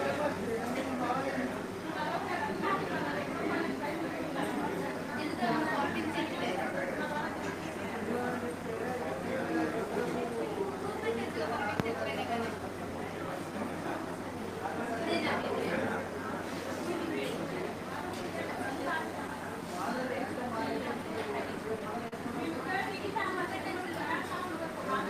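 Clock drift between sender and receiver runs through the whole clip. The sender's clock is roughly 4 percent slow. The receiver's buffer keeps running short, so small timing hiccups recur at uneven intervals from start to finish.

Repeated timing corrections run from 0.12 s to 25.05 s. The receiver keeps repeating short pieces to stay in step, and playback moves at 97 percent speed. The repeats add well over half a second in total. They sound like slight stumbles and an unsteady tempo.

Scattered short gaps appear between 11.75 s and 24.37 s. There are around fifteen of them, from lost or late packets. The receiver patches each hole by continuing the last sound. The longest is about 40 ms. Each is heard as a brief tick, smear or hiccup.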